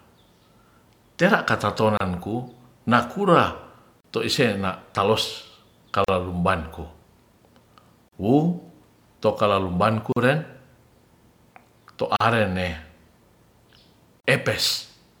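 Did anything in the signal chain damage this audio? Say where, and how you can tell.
Yes. Brief silences cut into the speech, 31 ms at 1.97 s and 40 ms at 4.00, 6.04, 8.08, 10.12, 12.16 and 14.20 s. These are gaps at a join of encoded pieces: the codec encoded roughly 2-second segments separately and butted them together untrimmed, leaving encoder delay and end-frame padding as dead air.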